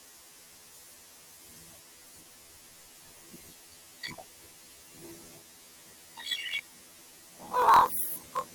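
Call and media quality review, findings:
Robotic buzz at about 42 Hz, whole clip, octave-raised grain: planar audio read as interleaved, 24 ms channel blocks each replayed left then right at double speed.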